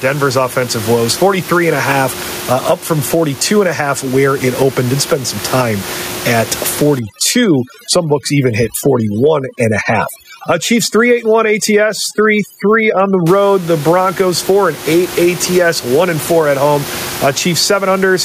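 Gain pumping runs through the whole recording, with a swing of around 15 dB. The likely cause is gain set far too high, so a fast limiter clamps down on every peak and squashes the speech.

Overdone noise removal takes hold from 6.99 to 13.27 s. An aggressive noise reducer shuts off frequency bands it mistakes for noise, so the room noise, which sits about 19 dB below the speech, drops and breaks up into twinkling specks, and the quieter parts of the voice go with it.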